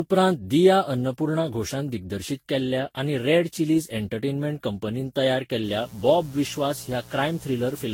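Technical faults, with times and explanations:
Throughout: generation loss. The speech sounds swirly, smeared and hollow, with blurred consonant onsets and nothing above about 16.6 kHz. This is likely from repeated lossy re-encoding, roughly ten passes through Vorbis at around 61 to 64 kbit/s. Each pass quantises again on a shifted frame grid. The noise and spectral gaps pile up. The result is worse than a single encode at that rate would give.
5.63–7.93 s: mains buzz. Just after "चिलीज़ एंटरटेनमेंट कंपनीन तयार", a steady, raspy buzz enters and lasts to the end. It sits about 25 dB below the speech. Its pattern follows 60 Hz mains. Sharp switching spikes arrive twice per cycle, as from a dimmer, rectifier or unshielded lead. Those spikes spread harmonics far up into the kilohertz range. That is why the buzz sounds gritty rather than like a pure hum.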